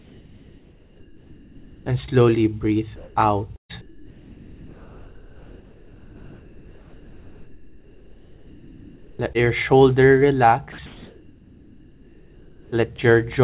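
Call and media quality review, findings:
Comfort noise in place of the background, 0.0–1.86 s, 2.96–3.16 s, 3.81–9.19 s, 10.86–12.72 s: the real background gives way to steady, featureless hiss, about 6 dB quieter at first, then about 4 dB lower (level unchanged at 2.96 s). Likely sender-side discontinuous transmission, with the receiver synthesising filler noise.

Burst of packet loss, 3.56–3.71 s: about 140 ms missing. The last sound is held, then fades to near silence for roughly 120 ms. Jitter buffer concealment extends the final frame, and playback resumes past the lost section.

Short concealed packet loss, 9.33–9.36 s: a brief smear where about 20 ms never reached the decoder in time. The receiver patches the hole by extrapolating the preceding sound, then crossfades back into real audio.

Sound dropped by the voice detector, 10.72–10.78 s: about 30 ms of sound is cut and replaced by flat comfort noise until transmission restarts. 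The likely cause is the sender's detector classing quiet sound as background. Band limit at 4 kHz fits G.711 mu-law narrowband.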